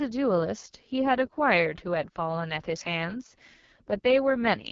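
AMR wideband (HD Voice) codec damage runs through the whole clip, from start to finish. The speech has been squeezed through a pulse-driven model of the vocal tract, and here the coding is heavy: the voice comes across rough and raspy, which fits AMR-WB's lowest 6.6 kbit/s mode. Detail above 6.4 kHz is only shaped noise rather than real speech, and nothing at all remains above 7.2 kHz.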